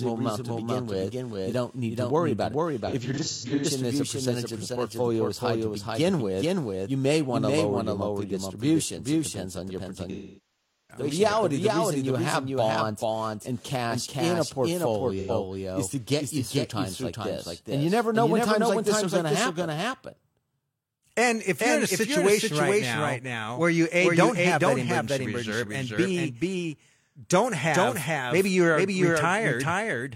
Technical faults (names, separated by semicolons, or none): doubled audio track; AAC frame loss with concealment